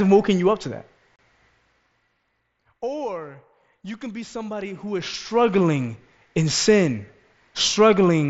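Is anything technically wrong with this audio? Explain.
Yes. Unconcealed Bluetooth headset packet loss at 1.16 to 1.19 s, just after "you up to that": voice packets between headset and phone were dropped without repair, leaving an abrupt 30 ms silent gap, consistent with about four lost frames.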